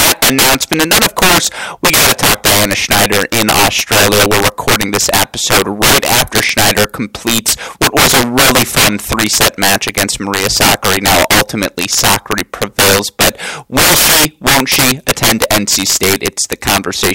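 Throughout the speech, a gain stage drives the signal about 19 dB past the top of its integer range, and instead of being limited, the values wrap around to the opposite sign. This integer overflow hits roughly 7 percent of the samples, concentrated on the loudest moments, where each peak is flung across the full range in a single step. The result is violent, sharp cracks on every strong syllable, far harsher and more abrupt than ordinary clipping would sound.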